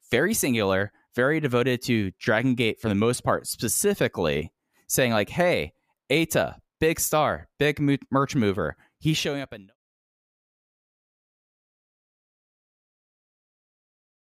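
Nothing in the speech recording stood out as a technical problem on listening, and the smooth fade-out that begins around 9 s and ends at 9.76 s eases the level down gently, without any click or hard edge.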